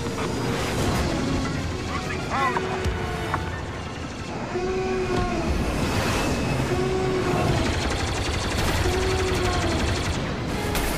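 No technical faults can be heard anywhere in this clip. There is nothing here that needs a time marker or an explanation of what went wrong.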